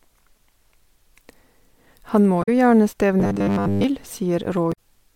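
A speech clip with two kinds of fault. Damaged data in a compressed stream causes brief glitches at 2.39 to 2.49 s and 4.69 to 4.78 s, as the decoder loses sync. From 3.20 to 3.84 s the speech turns into a rigid metallic buzz at 100 Hz, robotic sound from repeated short buffers. This is likely a 10 ms chunk replayed through most of that stretch.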